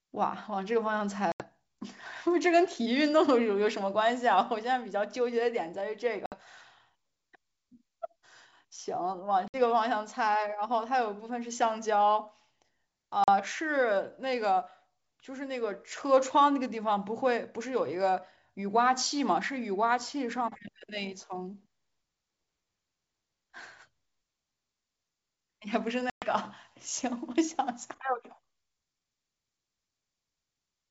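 Speech over a wideband call, clear to about 7 kHz with a light upper-band hiss, which fits G.722 at 64 kbit/s. It suffers packet loss on an ADPCM call. Hard silent gaps open at 1.32 s (80 ms), 6.26 s (60 ms), 9.48 s (60 ms), 13.24 s (40 ms) and 26.10 s (120 ms, several packets). The decoder's predictor and step size drift from the sender's. Each gap ends in brief, slight distortion that settles within tens of milliseconds.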